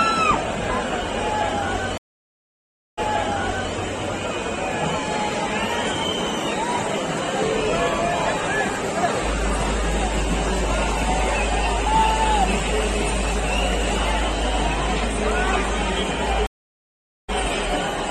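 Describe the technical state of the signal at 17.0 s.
At 17.0 s the signal is silent: a stream reconnect from 16.47 to 17.31 s, a gap of about 820 ms while a fresh decoder restarts, then resuming 23 ms earlier.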